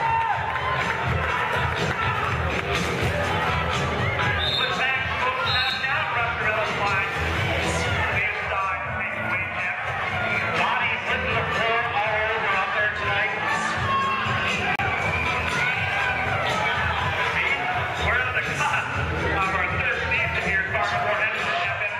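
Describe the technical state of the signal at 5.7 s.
At 5.70 s the signal drops out as a block of digital silence, a gap of about 4 ms in which the sound cuts out and then resumes. With no fade at either edge, the abrupt transitions make the gap read as a tick or dip rather than as silence.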